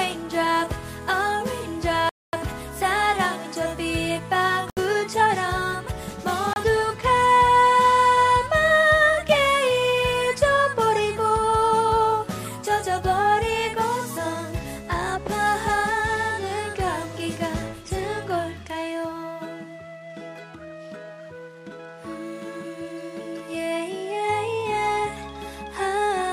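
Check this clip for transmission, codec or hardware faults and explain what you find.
Three abrupt dropouts to silence occur: 2.09 to 2.33 s, 4.70 to 4.77 s, and 6.53 to 6.56 s. The gaps last 239, 70 and 27 ms. The likely cause is a Bluetooth stall. Interference delays packets, the receiver's buffer runs empty, and playback halts until resent audio arrives. The sound stops dead, then returns.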